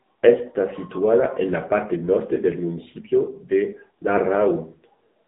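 AMR narrowband mobile codec coding runs through the whole of this speech clip. Energy stops at about 3.8 kHz, and the line band sits between 200 Hz and 3.7 kHz, so the voice sounds thin and telephone-like. The codec rebuilds speech from a vocal-tract model excited by sparse pulses in 20 ms frames. Here the damage is plainly audible as a buzzy, synthetic edge, which fits a low mode around 7.95 kbps.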